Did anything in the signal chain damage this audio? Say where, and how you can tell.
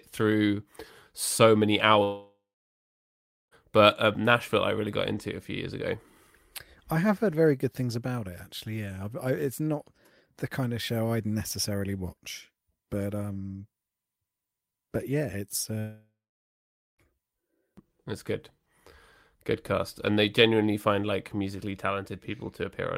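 Yes: a long network dropout at 2.03–3.54 s and 15.79–17.01 s. Each gap opens with a fading buzz extending the last sound, then falls silent for about 1.1 s and 0.86 s. Speech resumes with that stretch lost, likely from packets never arriving.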